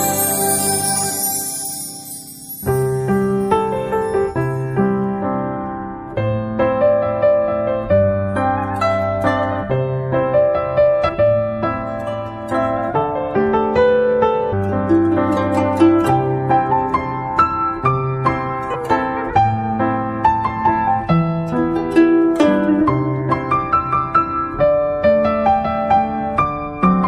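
The audio carries three short bursts of damaged data in a compressed stream, from 11.08 to 11.10 s, at 14.51 s and at 18.74 s. Each lasts about 20 ms or less and is heard as a brief chirp or blip. At these points part of the encoded data was corrupted or lost, so the decoder could not read those frames correctly, lost frame sync and had to find the next valid header before normal decoding resumed.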